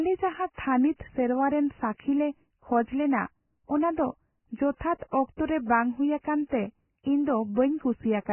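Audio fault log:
Throughout: Vorbis compression, likely. The speech has nothing above 3 kHz, and what remains has a grainy, hissy texture, with vowels sounding roughened and consonant onsets blurred. That fits a Vorbis encode pushed very hard, probably somewhere near 10 kbps. At that rate the encoder throws away the treble and quantises the surviving detail so coarsely that the fine structure turns into noise of similar energy. The damage here is heavy.
1.98 s and 5.11 to 5.13 s: pre-echo. Just before a sharp onset at each point there's a short burst of hiss, about 14 ms long at the first and about 21 ms at the second, so the attack sounds softened and smeared. The transform coder spreads its quantisation noise across the whole block. When a loud attack lands late in a block, noise sized for that attack leaks into the quiet stretch ahead of it.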